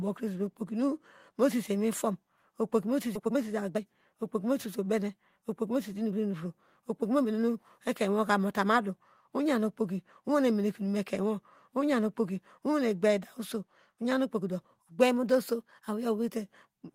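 Skip ahead at 3.15 to 3.17 s, just after "mosese iwiw fom okpoki": the speech jumps forward with no gap filled in, and roughly a second of talk is simply gone. The receiver had later audio already queued and discarded the stretch in between, whether it was lost in transit or dropped when the jitter buffer overflowed. The two sides of the cut are butted almost directly together, so the sentence lurches abruptly forward.

Jitter buffer speed-up from 3.19 to 7.34 s, ending just before "ekeinwoka mota madu oyen": the speech runs at about 111% of normal rate while keeping its pitch, so it sounds hurried rather than higher. The buffer was holding more audio than its target, and to shrink that excess delay the receiver repeatedly trimmed out short pitch-period-sized slices, removing roughly half a second in total over these four seconds.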